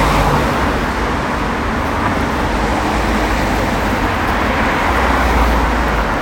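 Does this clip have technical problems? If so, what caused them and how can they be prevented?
No, nothing stood out as a technical problem on listening to these sounds, so there is nothing here that needs preventing.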